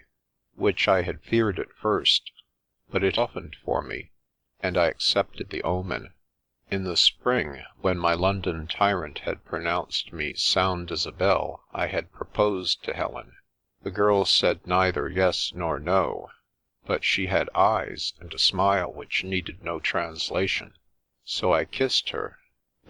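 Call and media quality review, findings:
Skip ahead at 3.17 s: audio jumps forward with no gap, about 0.4 s gone and the two sides butted together. Probable component: receive-side jitter buffer dropping a stretch on overflow (or loss in transit) while later audio was already queued, so delay drops sharply.

Jitter buffer speed-up, 3.43 to 4.89 s: playback runs about 5% fast at unchanged pitch, slightly rushed. Buffer above target, so the receiver kept trimming short pitch-period slices, about a tenth of a second in total, to pull latency down.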